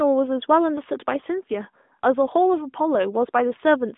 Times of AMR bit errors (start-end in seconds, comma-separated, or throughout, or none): none